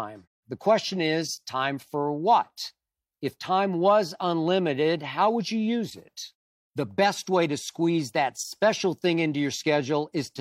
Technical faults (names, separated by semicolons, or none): none